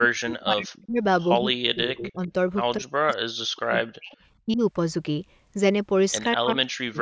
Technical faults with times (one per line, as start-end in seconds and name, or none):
0.00-1.01 speech suppressed in double talk
1.41-2.32 speech suppressed in double talk
1.87-2.07 echo leak
2.79-4.17 speech suppressed in double talk
4.46-4.62 speech suppressed in double talk
6.36-7.02 speech suppressed in double talk